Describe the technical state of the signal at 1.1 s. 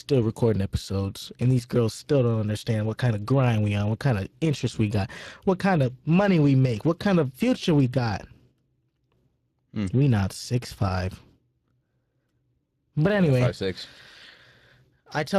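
Speex codec damage is present at 1.1 s and across the whole clip. This CELP coder rebuilds speech from a predicted spectral envelope plus a limited excitation signal, leaving a plainly audible hoarse, noisy grain, a level that fits roughly 22 kbps, with nothing above 15.3 kHz.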